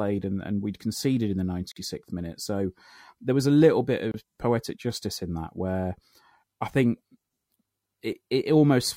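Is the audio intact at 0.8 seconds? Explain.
Yes, the audio is intact at 0.8 seconds, with nothing there that would interrupt or distort the speech.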